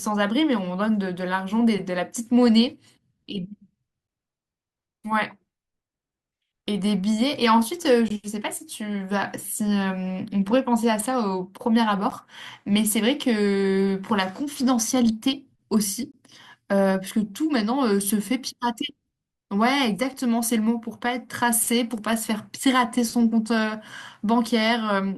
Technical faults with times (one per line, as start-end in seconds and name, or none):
4.07 gap between stream segments
8.08 gap between stream segments
12.10 gap between stream segments
16.12 gap between stream segments
20.14 gap between stream segments
24.14 gap between stream segments